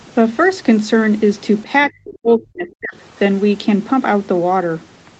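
Speech suppressed in double talk, from 1.89 to 3.0 s: the speech sinks steeply, by as much as about 40 dB at its deepest, over roughly a second in all. This is likely an echo canceller that heard both ends of a call talking at once, could not tell this talker from loudspeaker echo, and clamped down on both. Across the clip the call's microphone processing leaves nothing above 8 kHz.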